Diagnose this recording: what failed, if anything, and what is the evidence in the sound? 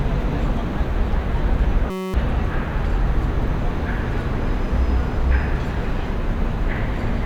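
Driver or buffer stage: a system hang loop from 1.90 to 2.14 s replays one frozen 5.33 ms buffer as a 188 Hz buzz. The spectrogram shows harmonic stripes, and the waveform shows identical cycles.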